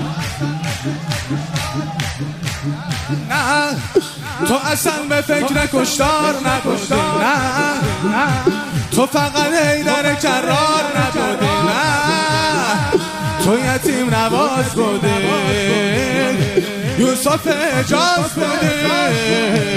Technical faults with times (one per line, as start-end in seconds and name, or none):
18.50 dropped samples